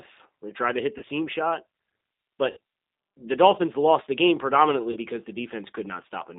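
A speech recording carried over a G.729 codec link at 8 kbit/s: the low-bitrate model rebuilds the voice from a filter, pitch predictor and sparse pulses, so it sounds rough and slightly synthetic, and a spectrogram shows energy confined to roughly 200 Hz to 3.7 kHz with nothing above. VoIP packet loss concealed by the speech codec occurs three times: at 0.98–1.05 s just after "tried to hit the" (about 40 ms lost, which fits two 20 ms packets), at 2.51–2.57 s (about 60 ms, consistent with three packets), and at 4.91–4.98 s after "lost the game predominantly" (about 40 ms). In each, the decoder repeats its last pitch and filter at falling gain, giving a brief stretched sound that fades. On a waveform this appears as a decaying stretch, and on a spectrogram as a frozen, fading spectrum.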